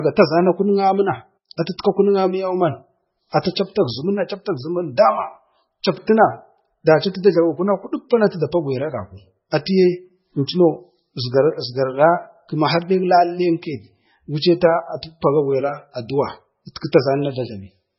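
Speech, heavily damaged throughout by what is likely MP3 compression at a very low bitrate, near 16 kbps, removing everything above 5.6 kHz and leaving a watery, swirling texture.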